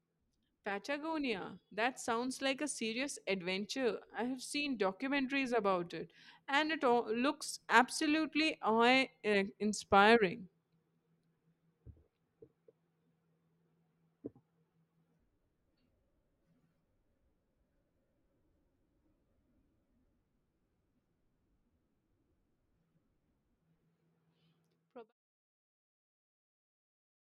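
Nothing here calls for comment; the speech just eases out in a smooth, deliberate fade that settles by about 25.1 s.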